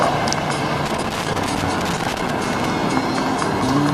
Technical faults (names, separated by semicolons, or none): loose connector crackle